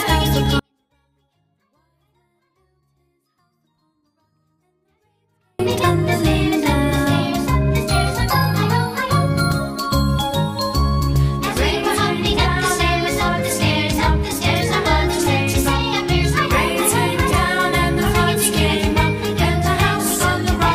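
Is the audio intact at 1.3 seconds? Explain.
No, at 1.3 s you're inside a 24-bit alignment error running from about 0.59 to 5.59 s. The 24-bit samples sit in the low bytes of each 32-bit word but get read as full 32-bit values, so everything lands about 48 dB down: clean, but barely audible.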